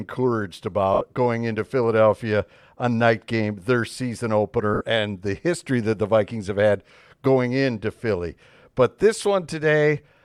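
Lost LE Audio frames at 0.94 to 1.01 s, just before "going into", and again at 4.74 to 4.81 s, between "night game their season" and "and the history that". Each time, about 70 ms of the Bluetooth stream vanished, which fits seven 10 ms LC3 frames. The decoder covered the gaps by replaying the last spectrum with scrambled signs, fading it as the loss went on, so the speech briefly turns into a noisy, fading smear under the light codec coloring.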